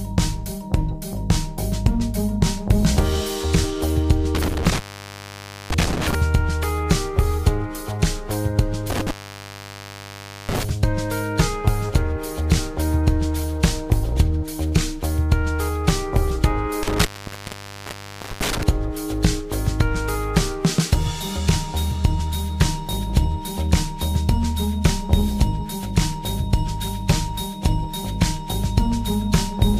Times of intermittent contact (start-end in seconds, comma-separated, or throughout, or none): 4.35-6.15, 8.90-10.70, 16.83-18.63